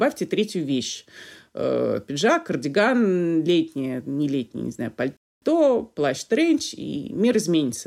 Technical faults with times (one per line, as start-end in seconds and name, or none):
5.17-5.42 rebuffering stall